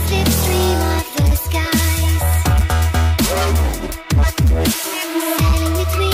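Hard clipping runs through the whole clip. The signal was driven about 6 dB beyond what one stage in the chain could pass. Every peak above that ceiling was cut flat. Only a small share of the samples, around one in twenty, hit the limit. Those flat tops add harmonics high in the spectrum. The result is a crackle on the loudest moments, rather than constant distortion.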